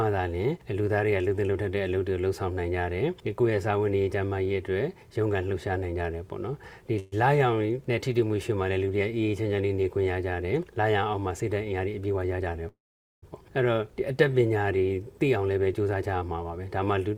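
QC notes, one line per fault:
6.99–7.14 s, call audio freeze: the last sound is stretched into a brief buzzing or hissing continuation lasting 125 ms, then the audio resumes exactly where it left off with nothing lost. The likely cause is late packets leaving the jitter buffer empty, so the receiver filled the gap and the playout delay grew by 125 ms.
11.64–12.48 s, jitter buffer speed-up: the sound runs at about 113% speed with the pitch unchanged, giving a hurried feel. Short pitch-period slices are cut repeatedly to shrink an overfull buffer, removing roughly a tenth of a second.
12.68–13.24 s, call audio freeze: a 544 ms hold in which the concealed continuation fades out, with about 450 ms of it silent. The audio then picks up from the same point with nothing missing. Playback now runs 544 ms later than before.
15.36–17.15 s, jitter buffer speed-up: another stretch at about 113% speed, same pitch, audibly rushed. 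Repeated removal of small pitch-period pieces takes out roughly 0.3 s to pull the accumulated delay back down.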